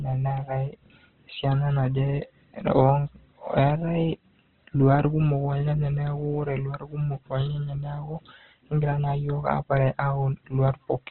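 Speech, with heavy Opus compression throughout: grainy, rough, band-limited, nothing above 4.1 kHz, a flat spectrogram ceiling, likely a very low bitrate around 12 kbps.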